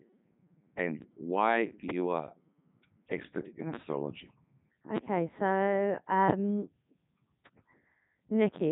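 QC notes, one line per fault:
Throughout: Codec 2 vocoder. The speech has been reduced to pitch, voicing, energy and a coarse spectral envelope at what sounds like 3.2 kbit/s, then rebuilt from sine waves, so the original waveform is gone and the voice comes out robotic and buzzy with heavy damage. On a spectrogram the harmonics look unnaturally regular and nothing appears above about 3.9 kHz; the waveform shape no longer matches natural speech.
1.90 s, 4.97 s, 6.30 s: loud pop. Each is a single sharp pop lasting about 20 ms, sitting on top of the speech, which continues underneath; the first follows "and why". The first stands roughly 20 dB above the signal, the later two roughly 25 dB. The likely cause is a voltage step or spike from a plug, switch or static. On the waveform each shows as a tall narrow spike, and on the spectrogram as a thin vertical line.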